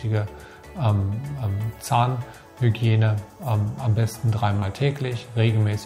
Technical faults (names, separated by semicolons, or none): short concealed packet loss